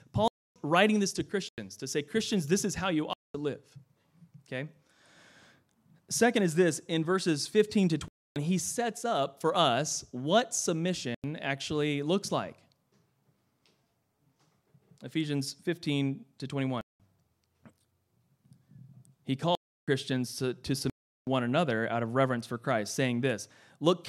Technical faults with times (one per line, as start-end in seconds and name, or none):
0.28-0.56 block of digital silence
1.49-1.58 block of digital silence
3.13-3.34 block of digital silence
8.08-8.36 block of digital silence
11.15-11.24 block of digital silence
16.81-17.00 block of digital silence
19.55-19.88 block of digital silence
20.90-21.27 block of digital silence